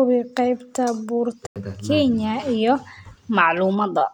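At 1.47 s to 1.56 s a corrupt frame is muted: a rejected compressed frame leaves an abrupt 93 ms hole, fitting one lost frame, shown as a blank vertical band on the spectrogram.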